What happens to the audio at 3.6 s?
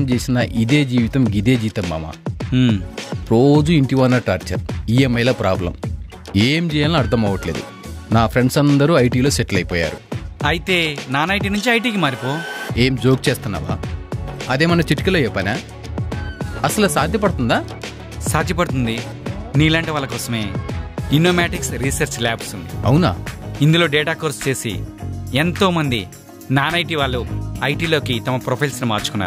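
Nothing goes wrong at 3.6 s; the audio plays through that moment intact, with no dropout, click, glitch or other fault.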